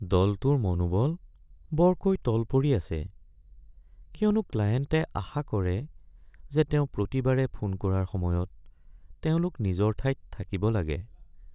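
Listening to this speech recording, nothing stood out as a technical problem at any point.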